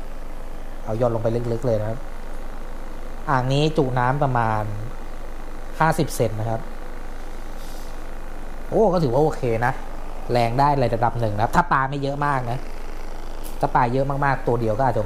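From 9.12 to 10.62 s the sound takes on a gritty, inharmonic fizz from crude rate conversion: samples were dropped or repeated without filtering, which fits a 48 kHz to 44.1 kHz change, leaving error roughly 30 dB down. Unlike clipping, its tones bear no harmonic relation to the sound.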